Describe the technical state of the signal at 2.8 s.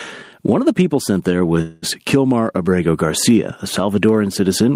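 At 2.8 s the signal is caught in gain pumping, which runs through the whole clip rather than appearing as an isolated event. The level swings by around 15 dB. The likely cause is a gain setting far too high, with a fast limiter or compressor clamping down on each peak. Loud and soft parts end up closer in level, and everything sounds squashed.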